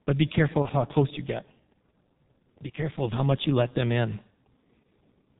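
Throughout, the speech has a G.723.1 codec sound. Nothing passes above 4 kHz. Consonants blur, and the voice is heavily muffled and hoarse, consistent with about 6 kbit/s.

From 0.62 to 0.68 s, between "but be careful" and "how close you get", there is VoIP packet loss concealed by the speech codec. About 30 ms is lost. The decoder stretches the previous sound into a brief fading buzzy tone or coloured noise.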